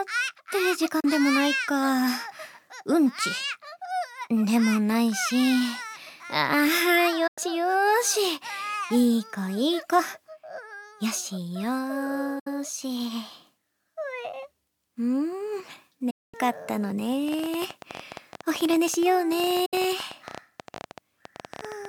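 Right at 1.0 s there's a short digital broadcast dropout: the receiver lost the signal or hit frames that failed their checks and muted, fading out over about 8 ms and leaving a 32 ms hole. It happens again at 7.27 to 7.38 s (96 ms), 12.39 to 12.47 s (64 ms) and 16.10 to 16.34 s (224 ms), the longest gap. Every length is a multiple of 32 ms, which points to 32 ms frames going missing. Whatever was sent during each gap is simply gone.

From 17.28 s to the end at 21.86 s a train of clicks rides over everything. There are around seventy of them, about 15 per second, spaced unevenly, each a similar sharp tick, and the loudest stand out by around 10 dB over the sound. The likely cause is interference from nearby gear or a faulty connection or power supply. Another dropout cuts through the ticking at 19.66 to 19.74 s, a 64 ms gap with the same quick fade.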